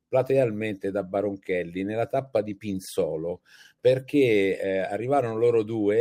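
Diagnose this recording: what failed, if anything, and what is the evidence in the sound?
DAB burbling from 5.67 to 5.74 s is a codec-stage failure in digital radio reception. The speech gets short blips of noise in single sub-bands, which fits about three MP2 frames corrupted by residual bit errors of a few tenths of a percent. Unlike packet loss, nothing goes silent or repeats.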